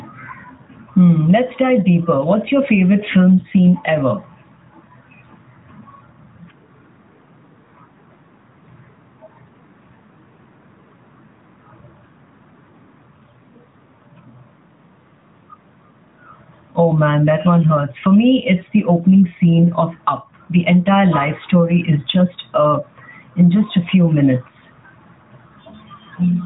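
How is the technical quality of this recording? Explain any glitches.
The recording has gain pumping throughout, heard over a narrowband mobile channel that passes nothing above 3.8 kHz. Across the whole clip the level swings by roughly ten decibels, so the speech sounds squashed and breathing. The likely cause is an input gain set far too high, with a fast limiter clamping down on every peak and releasing in the gaps.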